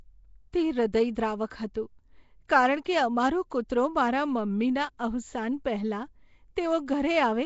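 Nellymoser compression runs through the whole clip. The speech has a rough, hissy halo and a smeared, underwater quality, with nothing above 7.7 kHz, which fits a Flash-era codec at 32 kbps. The likely cause is Nellymoser Asao leaving weak bands empty and filling them with noise.

Pre-echo occurs at 1.15 s, 1.74 s and 2.48 s. Each time, quantisation noise spread across a coding block leaks into the quiet moment before a sharp attack, giving a brief hiss of 11 to 15 ms and softening the onset that follows.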